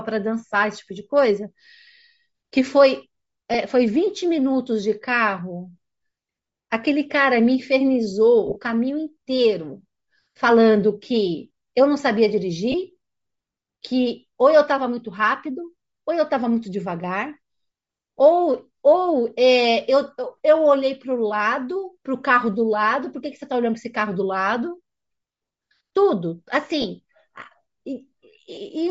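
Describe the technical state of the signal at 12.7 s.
At 12.72 to 12.74 s, lost LE Audio frames leave a brief noisy smear rather than a hard silent gap, which fits two lost 10 ms frames concealed by the decoder reusing the previous spectrum. Underneath, a breathy, grainy top band filled with noise rather than simply cut off is likely Bluetooth LC3 compression at a low bitrate.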